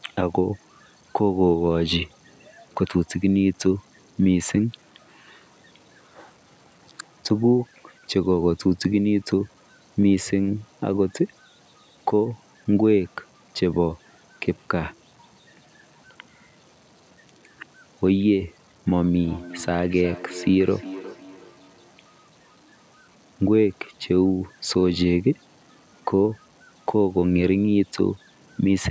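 Throughout the speech, the quietest passages turn grainy, and the grit rises and falls with the signal. The cause is likely low bit depth without dither, with truncation to roughly 8 bits. The error sits around 40 dB below the speech. On a waveform, quiet stretches show visible staircase steps. A spectrogram shows a signal-dependent haze instead of a steady noise floor.

From 18.96 to 22.24 s there is feedback echo between two devices. Another device in the room replays the call, and this microphone picks it up again. Each syllable returns every 400 ms, thinner and more ringing, with the loudest repeat about 17 dB below the speech. A spectrogram shows faint copies of each band of energy, shifted right at even 400 ms spacing.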